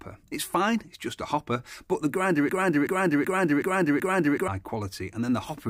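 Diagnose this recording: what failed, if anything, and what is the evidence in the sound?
A broken-record loop starts at 2.49 s and runs to 4.48 s. One piece of audio about 0.38 s long plays back to back, repeated 5 times, each pass exact. The audio that belonged in that stretch never appears. The likely cause is a stall in the player, encoder or stream. The stage stopped getting new data and kept sending the last fragment it held, until fresh data arrived.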